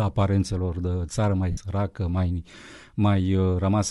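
Throughout the speech, the codec damage is plainly audible: a grainy, breathy edge where the upper spectrum has been thinned and filled with noise. The likely cause is Bluetooth LC3 compression, with artefacts consistent with about 48 kbps and 7.5 ms frames.

From 1.51 to 1.58 s, lost LE Audio frames left a 60 ms gap, which fits eight 7.5 ms frames. The decoder covered the gap by repeating the last spectrum with randomised signs, so the speech there turns into a brief noisy smear.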